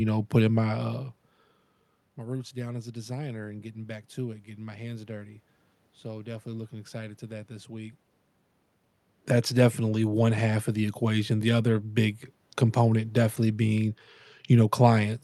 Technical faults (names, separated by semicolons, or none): none